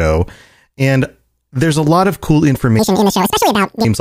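Speech that, from 2.79 to 3.85 s, right after "a lot of cool", jumps to double speed and an octave higher. This is audio read two samples at a time: pairs of samples are taken as one frame, halving the duration and folding high frequencies back down.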